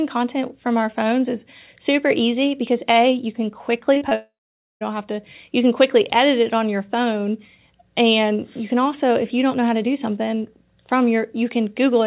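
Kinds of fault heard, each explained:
Short concealed packet loss: Three brief gaps land close together, from 3.94 to 4.03 s and again from 4.09 to 4.13 s. Each hole was patched by extending the preceding sound, then easing back into the real signal. The fills run about 17, 33 and 20 ms. They come across as a quick smear or wobble in the speech. A short consonant inside one of them can go missing.
Long network dropout: From 4.15 to 4.83 s the speech breaks off for about two thirds of a second. At first the last sound is stretched into a fading buzz or hiss. Roughly the final half second is just silence. Then the speech resumes further on, and the stretch in between is simply gone. The likely cause is a run of packets that never arrived over the network. The narrow, phone-like sound of the call path stays the same throughout.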